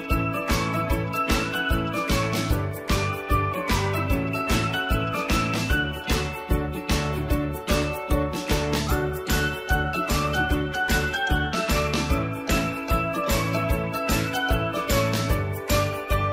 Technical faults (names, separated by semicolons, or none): channel delay (comb filtering)